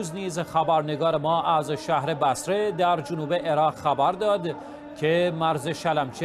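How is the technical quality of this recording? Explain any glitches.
No technical glitches can be heard anywhere in this recording, and the signal stays steady and intact throughout.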